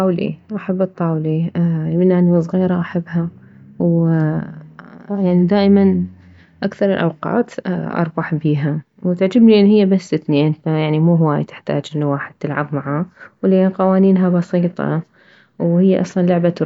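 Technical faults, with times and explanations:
No technical faults can be heard anywhere in the recording, with the speech signal intact and continuous across its whole length.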